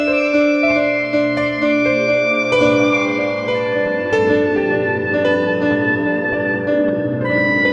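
No technical faults occur anywhere in this music, so there is nothing to place in time order.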